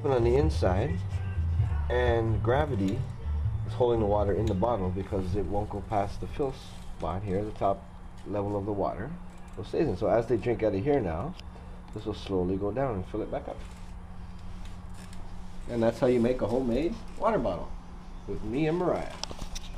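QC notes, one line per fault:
Nothing stood out on listening.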